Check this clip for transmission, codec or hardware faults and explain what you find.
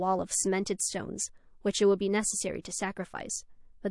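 Two codec faults are audible in this speech clip.

Throughout, the speech sounds watery and swirly, with metallic chirps on s sounds, dull treble and smeared attacks. This is likely MP3 compression at a low bitrate, around 48 kbps: the encoder cuts the high band and drops weak frequency lines that flicker between frames.

From 2.62 to 2.65 s, a hiss rises about 17 dB for roughly 30 ms ahead of a sharp attack, which then sounds soft. This pre-echo comes from quantisation noise spread across a long block of about 48 ms, suggesting the encoder never switched to short blocks.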